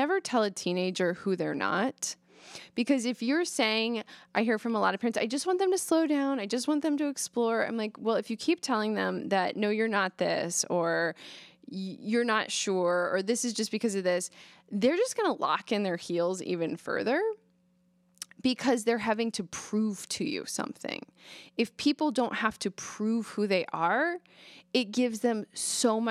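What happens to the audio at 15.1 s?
Nothing goes wrong at 15.1 s; the speech carries on intact through that moment, with no dropout, click, glitch or other audible fault.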